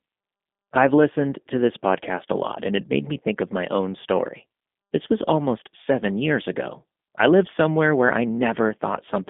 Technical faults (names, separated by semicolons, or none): G.729 codec